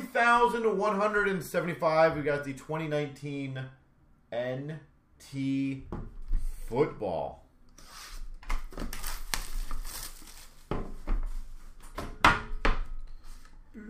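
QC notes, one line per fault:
The signal shows no audible technical faults at any point in the clip.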